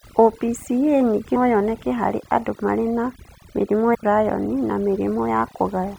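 From the start of the speech, overdone noise removal is audible. A noise reducer set far too aggressively is pulling individual frequency bands down to near nothing whenever their level sits close to its noise estimate. The gaps between phrases fall to an unnatural near-silence scattered with twinkling specks, and the quieter components of the voice are stripped away with the noise.

At 1.32 to 1.37 s, just before "yoneke harĩ andũ marĩ", there is a short burst from damaged data in a compressed stream, and the same fault recurs at 3.91 to 3.95 s, just after "andũ marĩ na mĩrimũ". In each case a stretch of the encoded stream is corrupt, so the decoder misreads those frames and loses synchronisation until it finds a valid frame header. Each event lasts about 45 ms and is heard as a brief blip that breaks into the speech.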